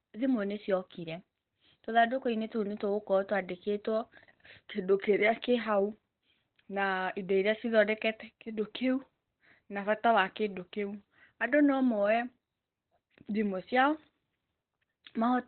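Heavy Opus compression, likely at a very low bitrate around 12 kbps, muffles and roughens this speech throughout, with a spectrogram showing nothing above about 4.2 kHz, consistent with narrowband speech-mode coding.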